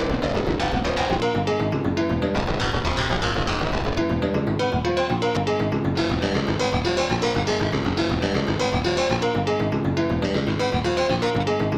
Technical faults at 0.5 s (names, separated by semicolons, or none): none